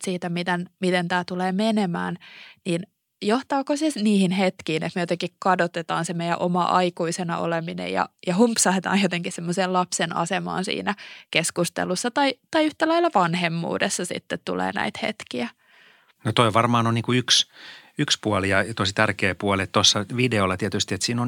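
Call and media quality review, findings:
No faults found in this speech recording. Nothing in the audio calls for a ticket entry.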